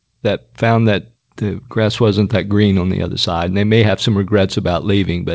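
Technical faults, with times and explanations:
No faults found; the speech has passed through a call path with nothing above 8 kHz, which fits a wideband G.722 codec at 64 kbps.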